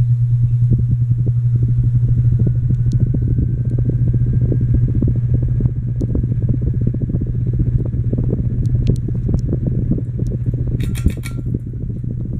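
No technical faults can be heard anywhere in the audio.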